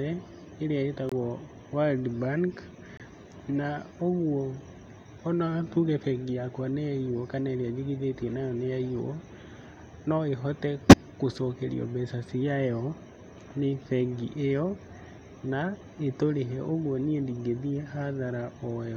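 At 1.09 s the speech drops out abruptly for about 34 ms. The same happens at 2.97 s, lasting about 38 ms. Both are corrupt frame muted faults. Bits in the compressed stream were damaged. The decoder rejected the affected frames, and the player filled the gap with silence. Each hole fits two lost frames. The cut starts suddenly, not with a fade. The speech resumes on time, so the timing is intact.

At 10.89 s a loud error lasts about 50 ms. This is a corrupt frame decoded fault. Damaged frames were played instead of rejected. Their gains or spectral codes were misread, so energy landed at the wrong frequencies. The result is a loud, unnatural sound that peaks near -5 dBFS. It spans roughly two frames.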